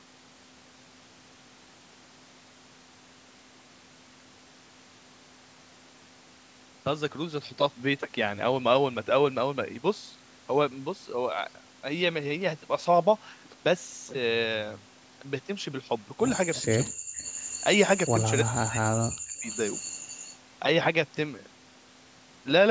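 Speech recording in which the far end's echo canceller likely fails to remove its loudspeaker pickup, producing echo leak: a faint copy of the voice trailing it by 337 ms, roughly 15 to 20 dB down, at 16.55, 17.19 to 17.64 and 19.47 to 20.36 s. The same canceller likely turns down the talker while both sides speak, so speech suppressed in double talk shows as a brief dip of about 10 dB at 16.62 s, then deep dropouts of around 40 dB at 16.86 to 17.1 s and across about a second from 18.45 to 19.48 s.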